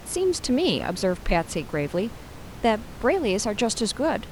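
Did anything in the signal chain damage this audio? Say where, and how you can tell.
No, nothing in the signal chain damaged this audio.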